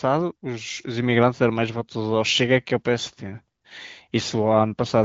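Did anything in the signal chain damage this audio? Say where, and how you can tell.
No, nothing in the chain has hurt this speech; it's simply been through the AMR wideband (HD Voice) codec, with the band stopping around 7.6 kHz and a texture that fits one of its higher rates, about 18.25 kbit/s, so the coding leaves at most a faint trace.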